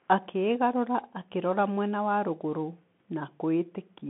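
Throughout, a Bluetooth CVSD headset codec confines the speech to 150 Hz to 3.4 kHz; one-bit step tracking leaves scratchy s sounds and granular hiss.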